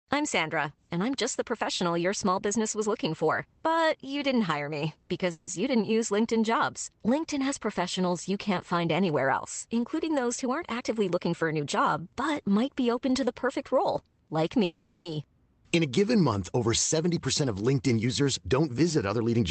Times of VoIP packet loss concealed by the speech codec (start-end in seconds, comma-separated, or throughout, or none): none